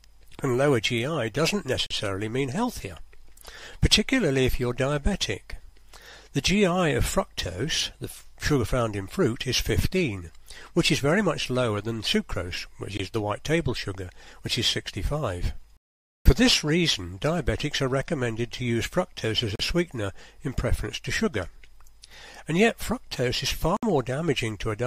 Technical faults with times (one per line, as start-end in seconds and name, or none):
1.86-1.91 Bluetooth dropout
12.97-13.00 Bluetooth dropout
15.77-16.26 Bluetooth dropout
19.55-19.60 Bluetooth dropout
23.77-23.83 Bluetooth dropout